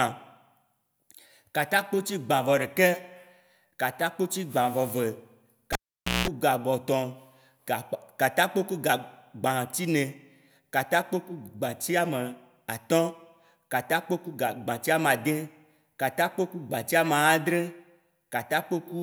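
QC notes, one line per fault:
5.73–6.28 s: cable pulled and plugged in. A pop, then 0.5 s of near silence. A 190 ms burst of 60 Hz mains buzz comes while only the tip touches. Another pop precedes "ga gbotɔn".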